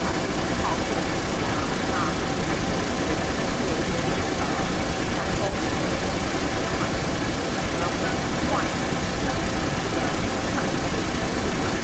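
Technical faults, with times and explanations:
throughout: echo leak, a second copy of the speech trailing by 283 ms at about 5 dB higher level, likely a loudspeaker pickup the far-end echo canceller missed; spectrograms show syllables' harmonics repeated 283 ms later, waveforms show doubled envelopes.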